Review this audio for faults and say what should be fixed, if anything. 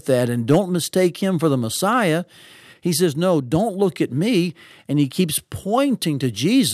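Hard clipping occurs from 0.51 to 0.58 s, just before "mistake him for the". For those 70 ms the speech peaks exceed what the signal chain can carry by about 4 dB, so the waveform tops are cut flat. The squared-off peaks generate harmonics high in the spectrum, heard as a brief crackle on the peaks. Set input gain or the preceding stage's level so peaks stay several decibels below full scale.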